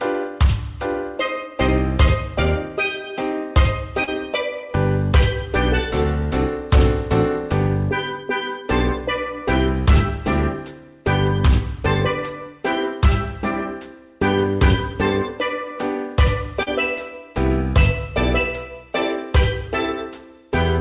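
At 4.04 s and 16.63 s, short concealed packet loss: about 40 ms went missing and was patched by extending the preceding sound, heard as a brief smear, visible as a smoothed, repeated patch. The audio stays band-limited to 4 kHz, which fits a G.711 call path.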